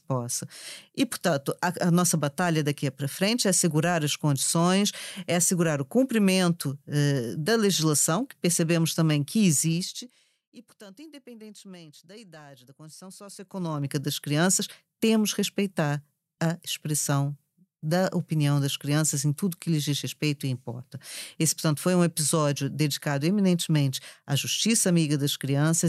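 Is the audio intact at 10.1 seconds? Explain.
No. At 10.1 s the speech is inside a stretch of zipper noise running from 9.52 to 10.41 s, between "que percebemos também que" and "e portanto independentemente da". The level drops by roughly 25 dB in unsmoothed 1 dB jumps, about twenty a second, and each jump leaves a small click. Together they form a ticking, zipping texture over the fading speech. A smooth fader move would lower the level with no ticks at all.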